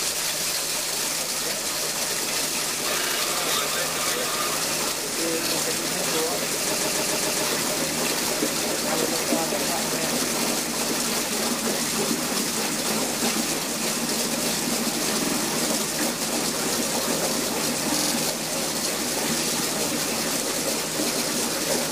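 A stuttering skip, where a short slice of sound plays again back to back, occurs at 3.02–3.16 s, 6.74–7.43 s, 13.08–13.12 s, 15.23–15.33 s and 17.97–18.11 s. The slices are 70 ms, 139 ms and 46 ms long, played two to six times, and the longest run adds about 0.7 s. These are repeated frames: a run of compressed frames was sent twice or more, so the decoder replays it, and each repeat adds time.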